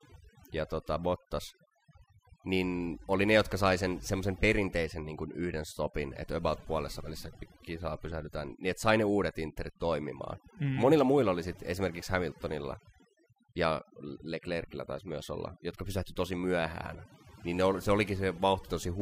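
Overdone noise removal affects the speech from start to finish. A noise reduction stage set too aggressively pulls individual frequency bands down or out whenever their level sits close to its estimate of the background noise. Quieter parts of the voice fall under that threshold too, so they vanish along with the noise. The pauses drop and break up into twinkling specks.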